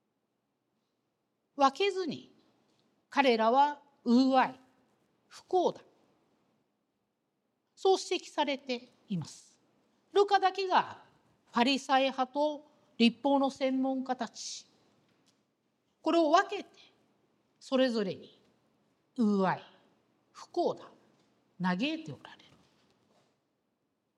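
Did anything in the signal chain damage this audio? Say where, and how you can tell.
No, nothing audible points to damage at any stage of the chain.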